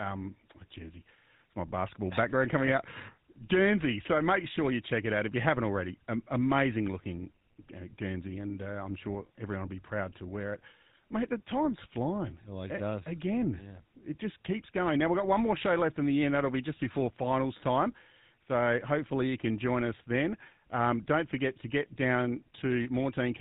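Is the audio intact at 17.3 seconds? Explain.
No. At 17.3 seconds the speech carries GSM full-rate codec damage, present from start to end of the clip. The codec models the vocal tract and excites it with a regular pulse train kept at only every third sample, which fits a 13 kbps stream. This produces a plainly audible buzzy, gravelly roughness with nothing above 4 kHz. Plain telephone band-limiting would sound muffled but smooth. This sounds rough and buzzing as well.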